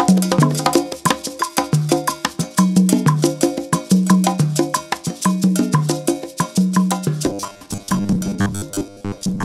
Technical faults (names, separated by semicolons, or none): robotic sound from repeated short buffers